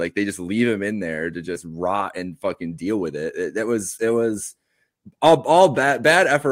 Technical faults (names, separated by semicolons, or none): hard clipping